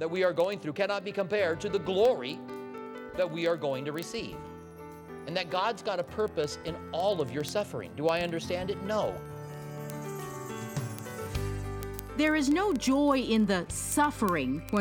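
A receiving device running on its own clock, not locked to the sender's digital link and off by roughly 500 ppm, slips one sample each time the clocks drift past each other. The result is word clock ticks: several hundred sharp clicks about every 40 ms from 0.12 s to the end of the audio.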